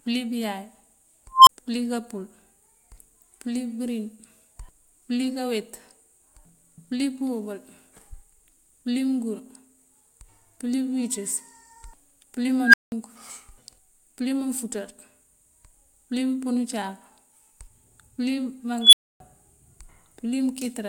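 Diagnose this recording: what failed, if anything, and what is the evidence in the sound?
An unstable filter in the call-processing stage fails three times, at 1.33–1.49 s, 12.64–12.92 s and 18.81–19.20 s. Each time a tone of about 1, 1.5 and then 3 kHz swells over 97 to 141 ms, clips, and drops to silence for 24, 187 and 275 ms while the filter resets. Acoustic feedback howl builds more slowly and never ends in a dead gap.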